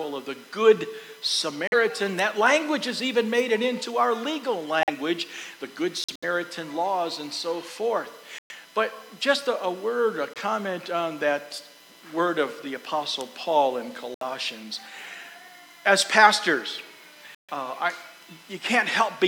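Corrupt frame muted dropouts occur at 1.67, 4.81, 6.04, 8.38, 10.33, 14.14 and 17.35 s, lasting 0.06 to 0.2 s. Damaged compressed frames were rejected by the decoder and replaced with silence, so the sound cuts out abruptly, with timing preserved. Each shows as a flat gap in the waveform and a sharp-edged blank vertical band on a spectrogram.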